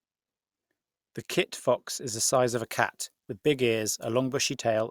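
From 2.55 s to 4.55 s, just after "fox is the size", pre-emphasis is left on. The treble boost applied before storage, which fits the CD 50/15 µs curve, was never undone on playback, so highs sit about 8 dB above 1 kHz at 10 kHz. The speech turns thin, bright and hissy, with sharpened sibilants. On a spectrogram, energy above a few kHz brightens for that span. The waveform looks spikier, with more fine high-frequency detail.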